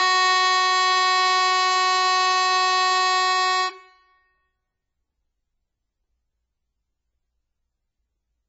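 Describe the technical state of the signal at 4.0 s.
At 4.0 s, as throughout the music, the sound is watery and swirly with nothing above 7.6 kHz, likely from heavy MP3 compression at a very low bitrate such as 16 kbps.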